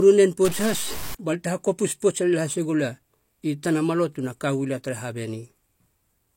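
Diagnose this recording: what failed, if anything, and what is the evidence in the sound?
Low-bitrate audio saved at a high bitrate runs through the whole speech clip, a codec-stage fault. The MP3 carries nothing above 16.3 kHz and keeps the smeared, watery texture of a heavily compressed source, which points to a 32 kbit/s HE-AAC encode likely re-saved at 256 kbit/s, unable to restore what was discarded.

A stuck bit appears from 0.45 to 1.15 s, likely in the converter or sample-format path. One bit of each sample holds a fixed value, so roughly half the samples are offset by its weight, producing distortion that follows the waveform and fills quieter gaps with noise.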